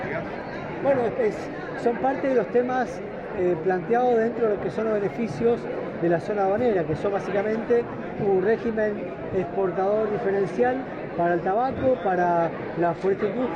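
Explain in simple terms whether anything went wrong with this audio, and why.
From 8.44 s to the end, the connection slowed and the player switched to a lower-quality version of the stream, a fault called an adaptive stream at a lower bitrate. The change is sudden, with no gap: the sound turns duller, nothing above about 11 kHz survives, and compression artefacts grow.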